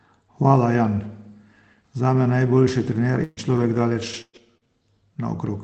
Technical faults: repeated packet loss (robotic sound)

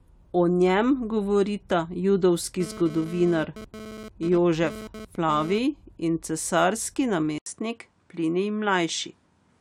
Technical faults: GSM phone buzz; input switched to a poorer device

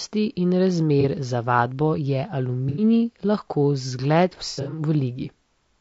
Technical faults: low-delay AAC compression; AAC frame loss with concealment

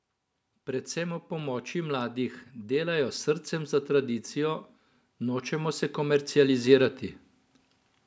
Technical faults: automatic gain rising

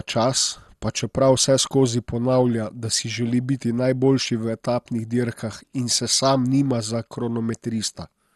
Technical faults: MP2 compression

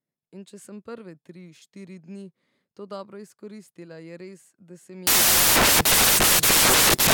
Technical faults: samples built from the wrong bytes

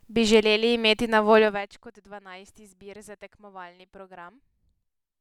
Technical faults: zipper noise

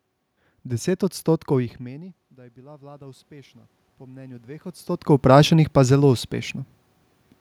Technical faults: automatic gain rising

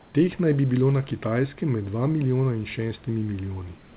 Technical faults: comfort noise in place of the background

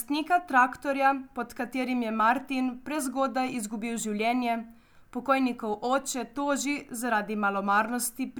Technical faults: none

